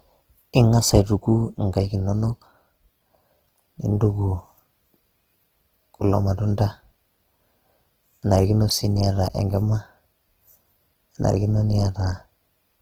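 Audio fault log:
Throughout: Opus compression, likely in its CELT music mode at a low rate that fits roughly 16 kbps, running short of bits, so it keeps each band's energy but rebuilds fine detail by copying lower bands or injecting noise. The speech comes across noisy, rough and grainy, with tonal parts turned hazy, and the damage is plainly audible. Bandwidth is not narrowed, though: content still extends to about 20.1 kHz.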